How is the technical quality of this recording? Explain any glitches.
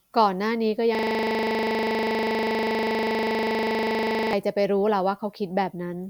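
A system hang loop damages the speech from 0.95 to 4.33 s: the computer or driver stalled while the audio hardware kept replaying the same 40 ms stretch of its ring buffer, about 85 times in a row, producing a rigid buzzing stutter at 25 Hz.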